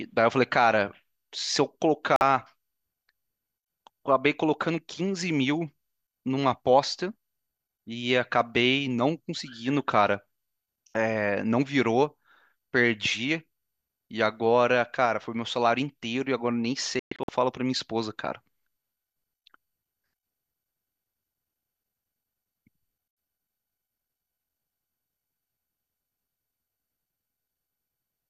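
At 2.16 s the speech cuts out for about 48 ms, a digital broadcast dropout. The receiver muted after bad frames. At 16.99 s it breaks into several short holes over 0.3 s, the longest 120 ms. That audio is lost.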